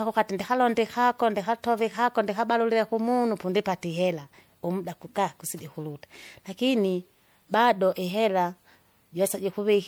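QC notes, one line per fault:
Throughout, generation loss. The speech sounds swirly, smeared and hollow, with blurred consonant attacks. Content stops at 20.9 kHz. The likely cause is repeated lossy coding, with the signal decoded and re-encoded about three times in a chain that fits MP3 at 96 kbit/s. Each pass quantises again on a shifted frame grid. Noise and spectral gaps pile up, so the damage exceeds what one such encode would leave.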